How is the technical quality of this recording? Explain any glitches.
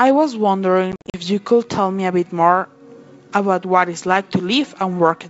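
The recording has one clear glitch: a burst of packet loss on an ADPCM call between 0.92 and 1.20 s. The G.722 wideband coding carrying the speech can be heard at its normal clarity, reaching up toward 7 kHz.

Across those 220 ms, about 150 ms of sound drops out as hard-edged silent holes, the longest 50 ms, which points to around fifteen short packets going missing. ADPCM sends only differences from a prediction, so each gap leaves the receiver's predictor and step size out of step with the sender's. Each return therefore comes back slightly distorted, settling within some tens of milliseconds. Clean dropouts or fades would not leave that disturbance after each hole.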